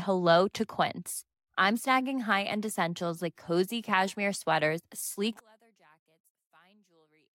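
Right after "cozy cashmere sweaters sleek", from about 5.40 s to the end at 7.35 s, the speech drops by about 36 dB to a faint residue. That's likely one channel inverted: with one side's polarity flipped, the centred voice cancels in mono.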